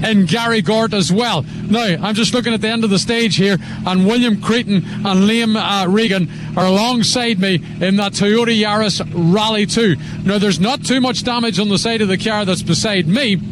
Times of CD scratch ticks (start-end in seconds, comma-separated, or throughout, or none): 8.02-8.55